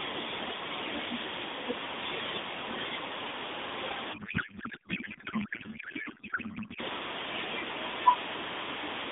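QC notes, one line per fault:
4.14–6.80 s, codec payload misread: speech turns to garbled warble and noise as the decoder takes fields from the wrong bit positions, which fits octet-aligned AMR read as bandwidth-efficient.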